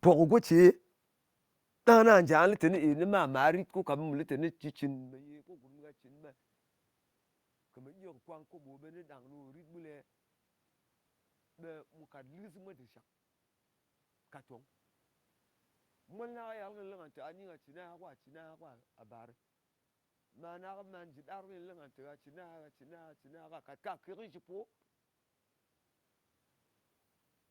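Nothing stood out on listening as a technical problem, since the room noise and the changes in level around 5 s and again near the end, where the talker shifts position relative to the microphone, belong to the recording itself.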